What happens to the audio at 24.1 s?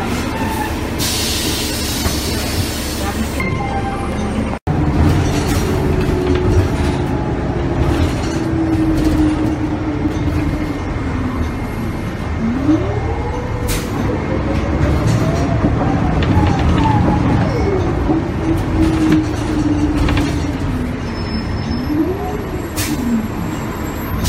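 Nothing goes wrong at 24.1 s; the audio plays through that moment intact.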